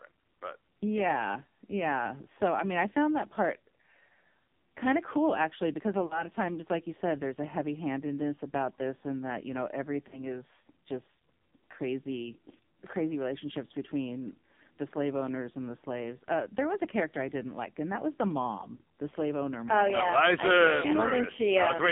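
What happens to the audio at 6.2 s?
From about 6.06 to 6.24 s the sound smears into a short, drawn-out warble that sags in level before recovering. These are lost AMR speech frames. About 40 ms of data failed, which fits two 20 ms frames, so the decoder repeated its last good pitch and vocal-tract settings with falling gain until clean frames returned.

Underneath, the AMR narrowband mobile codec is heavily at work. The band is confined to roughly 150 Hz to 3.6 kHz, and the buzzy, synthetic texture points to a low AMR-NB mode near 6 kbps.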